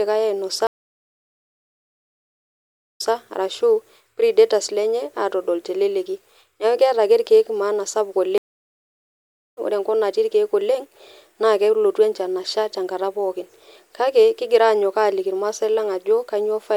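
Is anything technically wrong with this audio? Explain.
Yes, there are two stream reconnects, at 0.67–3.13 s and 8.38–9.58 s. The connection dropped and a fresh decoder picked up mid-stream. The speech goes silent for about 2.3 s, then replays 0.13 s, and later drops for about 1.2 s before skipping roughly a second and a half ahead.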